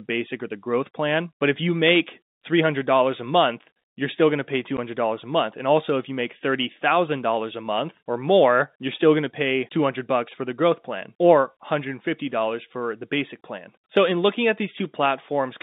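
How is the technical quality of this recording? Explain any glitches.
One short glitch interrupts the speech, which comes through a telephone-band line limited to about 150 Hz to 3.7 kHz by G.711 coding.

Packet loss filled with silence at 4.77 s: one 10 ms packet went missing and the receiver played silence in its place, leaving a brief hole with hard edges.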